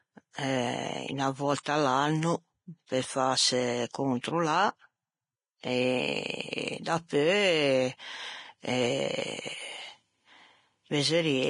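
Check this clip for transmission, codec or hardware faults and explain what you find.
Two codec faults are present. Throughout, the speech sounds hissy and grainy, with nothing above 10.5 kHz; this is likely heavy Vorbis compression, at a rate fitting roughly 30 kbps.

Pre-echo occurs at 1.63 s, 4.21 s and 6.83 s. A brief hiss of 26, 33 and 23 ms smears each attack, where block-spread quantisation noise fills the quiet just before it.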